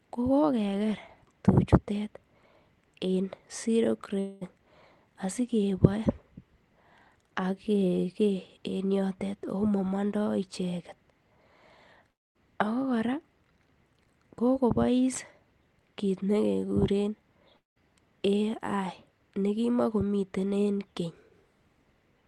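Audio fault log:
4.19 to 4.43 s, 12.11 to 12.37 s and 17.57 to 17.78 s: long network dropout, likely the cause of each of these gaps. About 220 ms, 240 ms and 200 ms of sound go missing. The receiver papers over each hole by stretching the last bit it had into a fading buzzy smear, and the smear covers the first gap. The later two sag toward near-silence before the sound snaps back, with the lost stretch simply gone.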